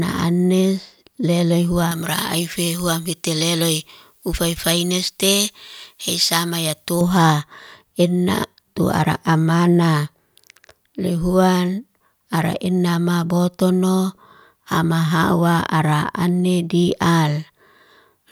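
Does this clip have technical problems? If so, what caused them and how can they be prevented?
Yes. Pre-emphasis left on from 1.91 to 7.01 s makes the speech thin, bright and sibilant. The treble was boosted before recording or transmission, but the matching de-emphasis was never applied on playback, so the boost stays in. High frequencies sit about 11 dB above the 1 kHz level at 10 kHz, a tilt that fits a J.17 curve. To prevent it, make sure the de-emphasis stage matches the pre-emphasis curve used upstream.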